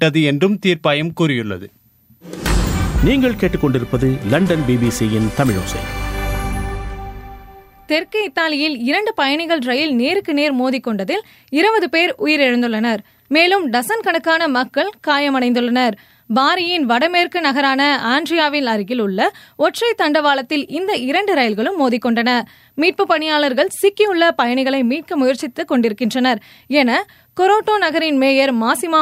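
No technical faults can be heard anywhere in the recording.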